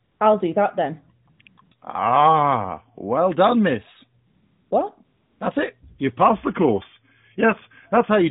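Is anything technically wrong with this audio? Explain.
Yes. The phone line drops into AMR comfort noise several times, and near the end there is a drift correction step.

AMR comfort noise, at 0.04–0.20 s, 1.26–1.28 s, 1.30–1.40 s, 1.42–1.46 s, 1.48–1.58 s, 1.62–1.72 s, 4.27–4.71 s and 5.05–5.41 s: the sending phone decided nothing was being said and stopped transmitting speech frames, so the receiver generated its own noise from a rough level-and-spectrum sketch. The real background gives way to a smooth, even hiss that cuts in and out, rapidly between 1.26 and 1.72 s.

Drift correction step, from 6.29 s to 8.10 s: a clock-matching stage most likely changed the playback rate in a single jump to rebalance its buffer. The sound slows by about 6% and drops about 107 cents, just over a semitone, then returns to normal at 8.10 s. The narrowband AMR-NB encoding (12.2 kbps) underneath these faults leaves its usual ceiling near 4 kHz.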